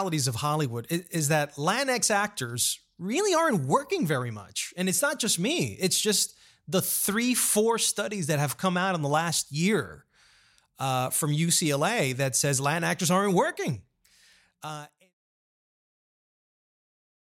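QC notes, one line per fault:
Nothing stood out on listening to this speech; the smooth fade-out that starts around 14 s and is complete by 15.15 s is an ordinary editor's fade.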